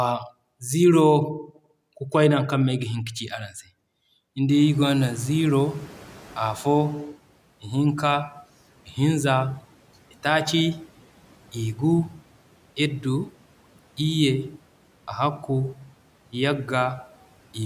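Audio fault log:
4.49–7.1 s, noise suppressor catching up: at around 4.5 s the room noise jumps by about 19 dB, and the suppressor's noise estimate is still tuned to the quieter level before the jump. For the next 2.61 s the new noise passes with too little reduction. As the estimate adapts, the noise sinks by about 10 dB; the risen room noise itself sits about 25 dB below the speech.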